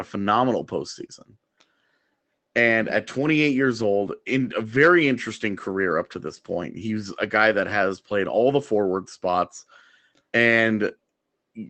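No technical faults can be heard in the speech. The call path it went through shows in the high end, which stops at about 8 kHz, consistent with an Opus link running at a modest bitrate of around 24 kbps.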